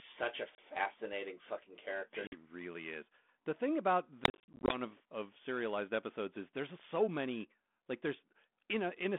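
Packet loss on an ADPCM call drops chunks of the stream, which are filled with silence, and the decoder's adaptive predictor and step size drift from the sender's, so each gap ends in a brief, slightly distorted recovery. A 30 ms hole at 0.55 s, a 50 ms hole at 2.27 s between "fucking character" and "really is the thing", then, after "is the thing about", a spatter of gaps from 4.24 to 4.79 s, 240 ms lost in total, the longest run 40 ms, before "of of serialized episodes".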